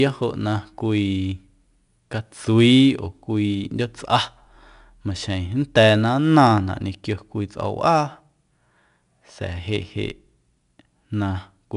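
From start to finish the speech carries the grit of 4-bit ADPCM compression. Each sample is coded as a coarse 4-bit step from a predicted value, so the error rides along as a broadband hiss that swells with the voice, plainly audible on every louder syllable and roughest on sharp onsets where the step size lags. Nothing sits above 10.6 kHz either, which points to a sample rate near 22 kHz.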